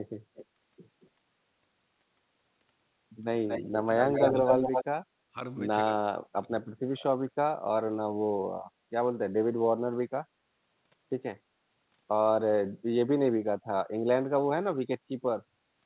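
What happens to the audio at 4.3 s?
Echo leak runs from 3.98 to 4.85 s. A second copy of the speech arrives about 230 ms late, roughly as loud as the original. This is likely a far-end speakerphone whose echo canceller let its microphone pickup pass back into the call.

Speech suppressed in double talk overlaps it from 4.01 to 4.64 s. The speech dips by around 10 dB for roughly 0.7 s, likely because the canceller could not separate talker from echo and attenuated both together.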